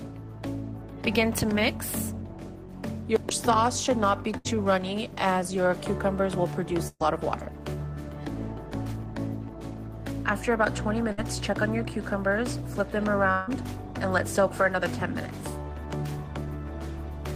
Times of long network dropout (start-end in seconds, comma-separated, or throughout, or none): 13.31-13.49